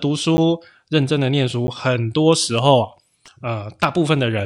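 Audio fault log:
0.37 s and 1.67 s, block of digital silence: a short tick each time, where 10 ms of speech cuts abruptly to zero and back, with no fade at either edge.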